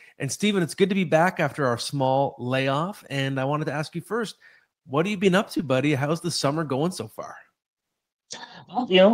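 At 5.57 s a short concealed packet loss occurs: about 20 ms of audio failed to reach the decoder in time, and the receiver extrapolated roughly 15 ms from the preceding sound before blending back. Through 5.61 s the speech briefly smears, with a wobble.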